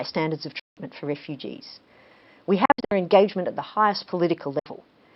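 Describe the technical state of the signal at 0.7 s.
At 0.7 s the speech is gone: the signal drops to silence from 0.60 s to 0.77 s, a hole of about 171 ms with abrupt or briefly faded edges, and the speech comes back further along, as though it had kept playing through the gap. That sound points to a likely Bluetooth dropout, where audio packets failed to reach the headphones in time and were discarded, so the output stayed silent until good packets arrived. A gap that long fits a run of several consecutive packets being lost.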